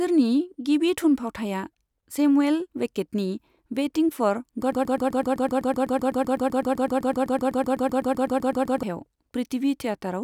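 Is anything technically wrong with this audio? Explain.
Yes. From 4.72 to 8.83 s the speech falls into a broken-record loop. A fragment of about 0.13 s repeats exactly, back to back, 32 times. The likely cause is a stalled player or stream resending its last buffer. The speech meant for that stretch is lost.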